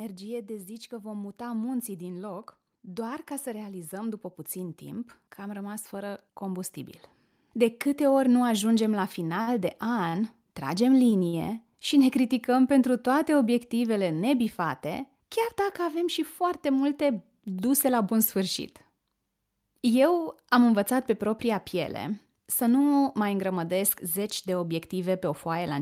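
Automatic gain rising runs from 0.88 s, just after "de zici", to 11.59 s, just before "și ne criticăm pentru", in this speech recording. The gain control judged the input too quiet and kept lifting its gain, so over roughly eleven seconds the talker and the background swell together by about 12 dB rather than the level staying put. Short stalls from a late packet occur at 9.41 to 9.49 s, 10.09 to 10.15 s, and 11.28 to 11.35 s, the last immediately before "și ne criticăm pentru". Each time, the jitter buffer emptied before the next packet arrived, so the receiver stretched the last bit of sound, by about 57 ms, 36 ms and 47 ms respectively, then carried on from where it left off. Nothing is lost, but each spot has a held sound, and the speech afterwards runs that much later.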